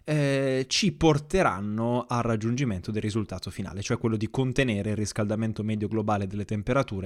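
Nothing in this recording stands out as a technical fault, so there's no trouble to walk through here.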